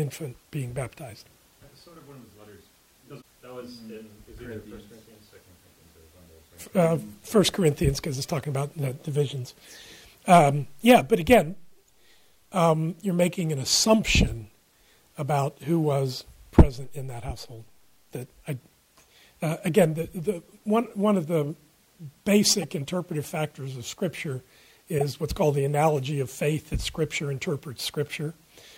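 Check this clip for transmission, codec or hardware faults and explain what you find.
Three short faults of one kind are present, each a corrupt frame decoded.

They fall at 8.43 to 8.45 s, 22.62 to 22.64 s and 24.98 to 25.02 s, each spanning roughly one to three codec frames. Damaged bits were decoded as if valid, placing energy at wrong frequencies, heard as a brief spurious burst. Unlike a dropout or concealed lost packet, it adds foreign sound rather than silence or a repeat.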